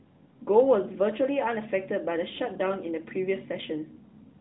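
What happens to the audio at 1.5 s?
At 1.5 s the speech carries on intact, with no dropout, click or other fault, only the steady narrowband sound of the AMR narrowband mobile codec, which passes nothing above about 3.9 kHz.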